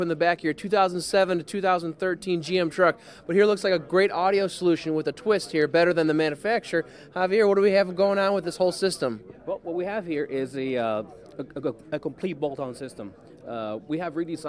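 No technical faults are audible.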